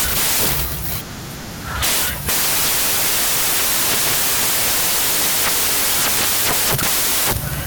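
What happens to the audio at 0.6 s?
At 0.6 s the speech is buried under loud, harsh broadband noise, and it stays that way for the entire clip rather than starting or stopping there. This is samples built from the wrong bytes: the reader assembles each sample with its bytes misaligned or in swapped order, so the rapidly fluctuating low-order bits land in the most significant position and dominate every value.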